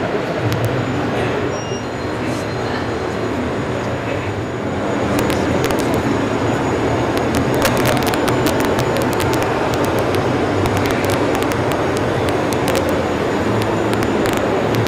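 Integer overflow cracks through the sound at 0.53–0.65 s, 5.19–5.94 s, 7.18–10.15 s, 10.66–12.89 s, 13.62–14.37 s and 14.75–14.87 s, with peaks driven up to about 4 dB past full scale. Instead of being held at the limit, each excess sample wraps around to the opposite extreme, so loud peaks snap violently across the whole range. Clipping merely flattens tops into a buzzy distortion. These are far harsher, explosive cracks.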